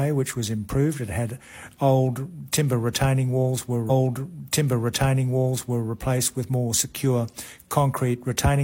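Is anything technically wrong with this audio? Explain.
Yes. From 3.86 to 5.86 s there is a stream segment repeated. The player queued the same chunk of audio twice. So about 2.0 s of material plays again. A small blip marks the jump back, and the programme runs 2.0 s longer.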